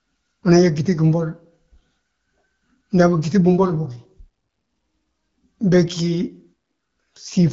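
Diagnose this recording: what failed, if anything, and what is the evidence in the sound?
Nothing failed: the speech comes through the AMR wideband (HD Voice) codec at 12.65 kbit/s with only light coding wear, and no stage from wiring to playback shows a fault.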